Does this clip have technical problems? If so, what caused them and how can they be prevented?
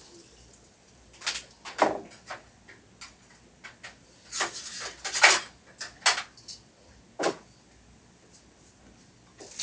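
Yes. Aliasing runs through the whole clip. Content that sat above 8 kHz has folded back down into the audible band as unrelated, inharmonic tones, giving high-frequency detail a gritty, metallic edge. The folded energy is strong, roughly 10 dB below the wanted sound, and the spectrum is packed right up to the 8 kHz edge. This fits a conversion from 44.1 kHz down to 16 kHz with no anti-aliasing low-pass filter applied first. To prevent it, use a proper resampler that low-pass filters below 8 kHz before reducing the sample rate.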